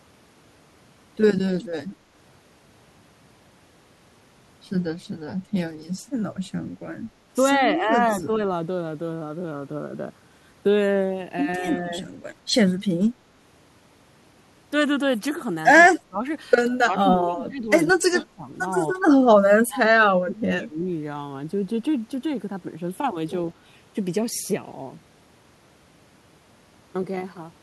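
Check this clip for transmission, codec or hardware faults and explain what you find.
One fault recurs: speech suppressed in double talk. The speech sinks at 8.26–8.43, 11.83–11.97, 16.04–16.24, 16.67–17.68, 17.93–18.47 and 19.35–20.85 s. The dips run from slight to near-silent, deepening later in the clip. An echo canceller likely could not separate the speech from the far end's loudspeaker echo while both played, and turned the speech down with it.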